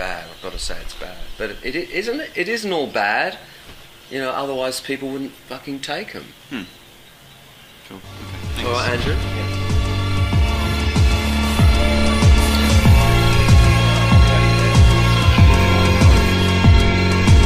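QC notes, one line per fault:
No faults heard anywhere in this clip.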